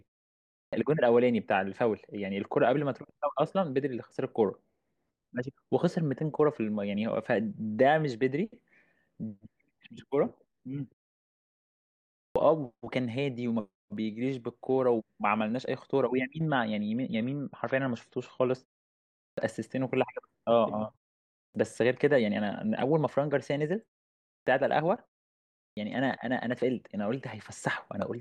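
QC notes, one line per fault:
0.49, 12.14, 19.15, 21.31, 24.26 and 25.55 s: clipped start after a pause. Each time the speech comes back out of silence, its opening gets chopped off, about 0.21 to 0.24 s of it, so the first sounds are missing and it jumps in abruptly. The output device seems to doze off during the gaps, which here run from about 0.4 to 1.3 s, and it takes about 0.2 s to wake up again.
16.47 to 18.47 s: adaptive stream at a lower bitrate. For about two seconds there is suddenly more codec grit on the speech, then it snaps back with no gap at either edge. That's the stream stepping down to a cheaper version while the connection struggled. The drop in quality is consistent with going from an AAC stream at about 96 kbit/s to about 32 kbit/s.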